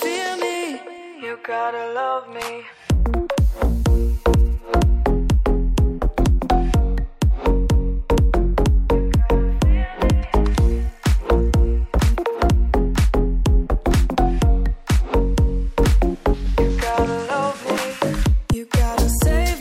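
No technical faults can be heard anywhere in this recording.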